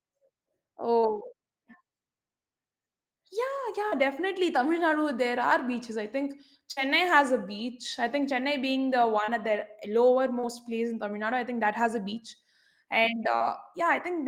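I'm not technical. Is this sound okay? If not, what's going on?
No. Short concealed packet loss happens at 0.99, 3.88, 9.24 (after "being the"), 10.40 (just before "place in") and 13.36 seconds. Each time, about 40 ms of the call's audio arrived too late, and the receiver patched the hole by stretching the preceding sound, leaving a brief smear or wobble.

A burst of packet loss comes at 6.72 seconds, between "are beaches I think" and "has a beach I". Several pieces of audio went missing together, so the last sound is held and fades briefly before the audio resumes.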